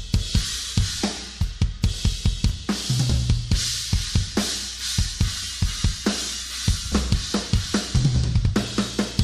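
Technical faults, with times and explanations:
Throughout, mains hum: power-line current at 60 Hz is leaking into the signal path, as a ground loop or nearby transformer would cause, laying a steady low tone with some low harmonics under the audio, sitting roughly 20 dB below the wanted signal and never letting up.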